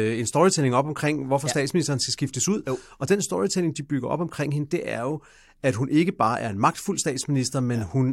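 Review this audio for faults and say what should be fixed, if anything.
No faults found; nothing needs fixing.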